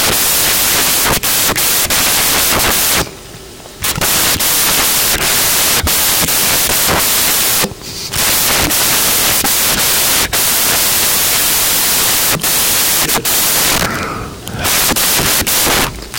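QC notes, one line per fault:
Throughout, samples built from the wrong bytes: the speech is buried under loud, harsh broadband noise across the whole clip. The bytes of each sample are being assembled in the wrong order or from the wrong offset, so the rapidly changing low-order bits end up as the most significant part of every value. The waveform's fine detail becomes its dominant content, producing broadband noise.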